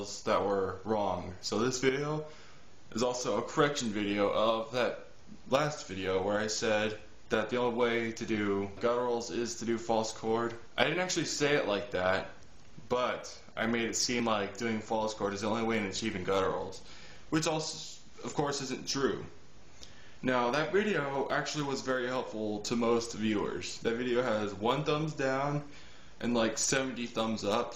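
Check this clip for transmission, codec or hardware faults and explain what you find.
One hardware fault is present: periodic USB or driver dropouts between 13.21 and 19.14 s. Roughly every 0.99 s, something blocks the audio path and about 10 ms of signal is skipped outright, so the waveform jumps ahead and leaves a tick or small pop, about seven in all. Network packet loss would be scattered and uneven, but these losses arrive on a steady clock and are heard only while sound is playing.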